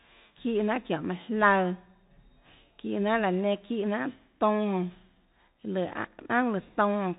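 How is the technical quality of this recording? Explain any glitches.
The quality is poor: the whole clip carries the Bluetooth CVSD headset codec. Its one-bit-per-sample delta coding, consistent with 64 kbps, removes everything above 3.8 kHz, adds grainy hiss, and makes sibilants scratchy.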